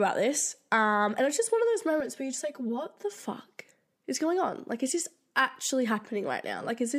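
From 2.00 to 3.23 s, right after "just one of those", the speech shows channel delay (comb filtering). One channel trails the other by around 5 ms before the mono sum, carving evenly spaced notches starting near 100 Hz, so the sound turns hollow and phasey.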